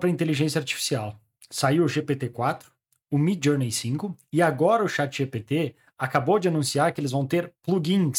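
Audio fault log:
No technical faults can be heard anywhere in the speech signal.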